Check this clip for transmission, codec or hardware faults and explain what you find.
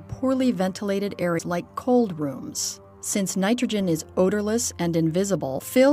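There's one real problem here, and it shows up twice: damaged data in the compressed stream. The first hit runs from 1.35 to 1.40 s and the second from 1.55... sorry, 5.55 to 5.61 s, each about 55 ms. In both spots some bytes in the encoded stream were lost or overwritten. The decoder can't read those frames, loses sync and hunts for the next valid frame header. You hear that as a short chirp, squawk, click or hole breaking into the sound.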